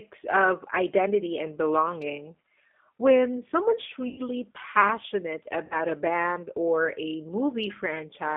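Speech that sounds narrow, slightly rough and synthetic, confined to roughly 250 Hz to 3.5 kHz, is the plainly audible damage of the G.729 codec at 8 kbit/s. At 4.08 to 4.21 s and 5.65 to 5.76 s the sound smears into a fading buzzy tone or coloured noise. This is VoIP packet loss concealed by the speech codec, with about 100 ms and 60 ms of audio extrapolated, which fits five and three lost packets.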